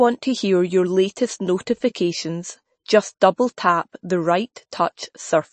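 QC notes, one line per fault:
Throughout, MP3 compression: nothing comes through above 8.3 kHz, so the speech sounds dull, with a plainly audible watery swirl and smeared consonants. The likely cause is an MP3 encoder starved of bits, which fits a low bitrate of 33 kbps.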